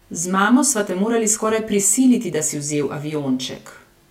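Speech with channel delay (comb filtering) running the whole way through. One side lags the other by around 20 ms, and folding them to mono carves evenly spaced notches from roughly 30 Hz upward, leaving the sound rough and slightly doubled throughout.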